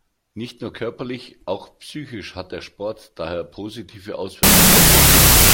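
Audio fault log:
4.43–5.54 s, wrong sample width: the final stretch of the speech is decoded with a different sample size than it was stored with, which fits 32-bit float data being read as 16-bit integers. Each stored sample splits into two values, so the audio plays at half speed and an octave low. The halves carrying low-order mantissa bits become loud hiss, while the halves holding sign and exponent keep only a coarse trace of the speech underneath.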